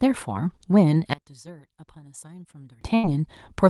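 From 1.13 to 2.81 s the speech drops about 23 dB to a faint residue, likely one channel inverted cancelling in mono; the waveform visibly shrinks. At 2.95 s a burst of packet loss fills 79 ms by continuing the last sound and fading it, then speech resumes at 3.05 s with 80 ms missing.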